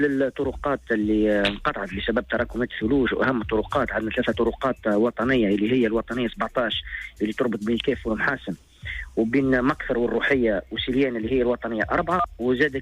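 No faults can be heard anywhere in the clip. Nothing interrupts or alters the sound at any point.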